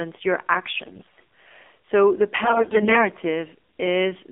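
It's a speech clip run through the AMR narrowband mobile codec the whole way. The band sits between 250 Hz and 3.5 kHz, and the plainly audible buzzy, synthetic quality fits a low AMR-NB mode around 7.4 kbps, where the sparse pulses driving the vocal tract model can't carry much detail. On top of that there are AMR bit errors from about 0.74 to 1.20 s and again from 2.44 to 3.08 s. Flipped bits in the weakly protected part of each frame throw the pulse positions and finer pitch, gain and spectral values off, so the voice turns hoarse and gargly while roughly holding its pitch and level. The error rate is around 7 percent in the first burst and around 15 percent in the second.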